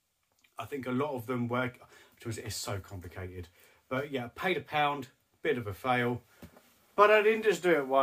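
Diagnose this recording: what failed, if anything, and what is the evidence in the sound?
No fault can be heard.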